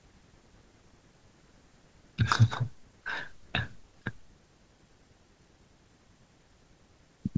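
Nothing in the recording stood out as a technical problem on listening.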